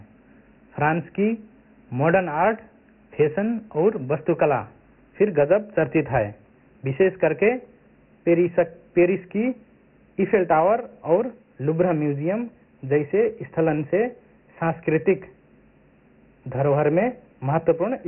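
Throughout, the speech sounds dull and gritty, with hiss riding on it and nothing above 3 kHz: Dialogic VOX ADPCM, a heavily lossy 24 kbps coding that fits 4-bit samples at 6,000 per second.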